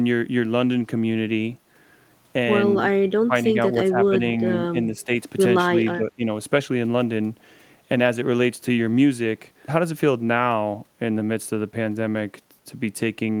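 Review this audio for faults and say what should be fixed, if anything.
The speech dips in five short bursts, at 3.21–3.34, 3.74–4.15, 4.72–5.09, 5.68–5.72 and 5.97–6.23 s, falling by up to about 20 dB. This is likely speech suppressed in double talk: the echo canceller mistook the talker for loudspeaker echo and turned everything down. Better double-talk detection in the echo canceller, or less suppression, should prevent it.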